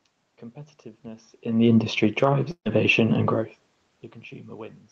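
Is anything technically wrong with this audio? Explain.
Yes, there's one. From 2.51 to 2.67 s there's a burst of packet loss: the receiver stretched the last bit of speech and faded it out, went silent for about 70 ms, then picked up again with roughly 140 ms of speech skipped.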